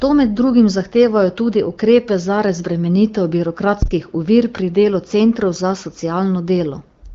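A phantom power thump hits this speech recording from 3.82 to 3.96 s, right after "tudi ukrepe za razbremenitev". A supply voltage was switched on or off on a live input, and the sudden DC step pushed through the coupling capacitors as a deep, low thud that dies away in about 31 ms. The speech is band-limited to roughly 7.2 kHz with light coding damage, which fits an AMR-WB HD Voice path running near 15.85 kbit/s.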